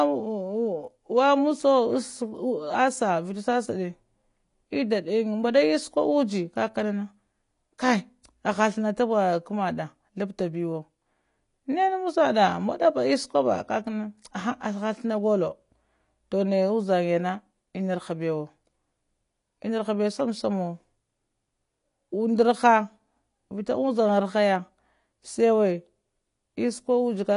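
Throughout, the speech sounds dull and smeared, with nothing above 10.5 kHz and a fizzy warble, likely from AAC compression at a low bitrate, around 32 kbps.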